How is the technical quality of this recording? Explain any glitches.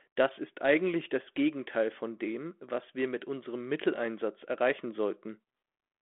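No glitches turn up here at all, just the narrow telephone-band sound of a 32 kbit/s G.726 line, running from about 250 Hz up to 3.4 kHz, doing its ordinary job on the speech.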